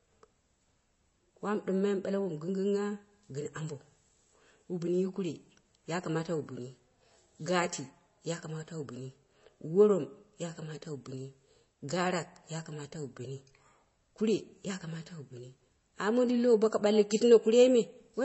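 Throughout, the speech carries MP3 compression, likely a low-bitrate encode that fits about 32 kbps. Everything above 7.9 kHz is gone, and the sound turns plainly watery and swirly.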